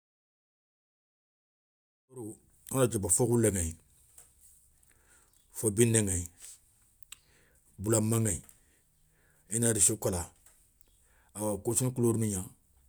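No technical faults in this speech recording; the level rises in a smooth, deliberate fade from around 2 s to 2.61 s with no click or hard edge.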